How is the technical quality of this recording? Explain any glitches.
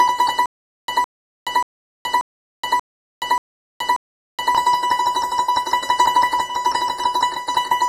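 The technical quality is poor: the music carries clearly audible compression damage throughout, and a stretch near the start breaks into a repeating stutter.

MP3 compression, likely the cause of the degradation across the whole clip, is plainly audible. Nothing is present above 15 kHz, so the highest treble of the music is simply gone. That cut-off and the density of the damage point to a low bitrate in the region of 40 kbps. Short of bits, the encoder discards quiet spectral components, and those it keeps flicker in and out between frames, giving the sound a watery, swirling texture and softened transients.

Stutter with silent gaps runs from 0.46 s to 4.55 s. A 160 ms fragment of the music plays, is followed by about 424 ms of digital silence, then returns unchanged, repeating seven times on a steady 584 ms cycle. The pattern sounds like a stalled player or stream that replays its last buffered fragment on each retry and then runs dry. 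The music that should have filled those four seconds does not play.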